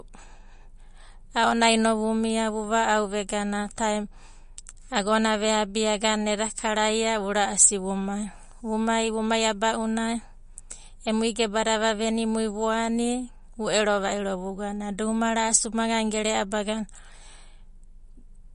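The speech was likely squeezed through MP3 compression at a low bitrate, around 40 kbps to judge by the damage. Nothing survives above 10.6 kHz, and weak frequency lines flicker between frames throughout, giving s sounds a swirly, watery edge and smeared attacks.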